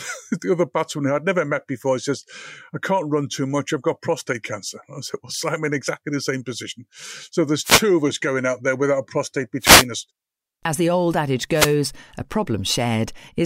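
Wireless microphone noise hits: the FM radio link fades, letting receiver noise rise in brief static bursts at 7.63–7.83, 9.60–9.86 and 11.51–11.77 s.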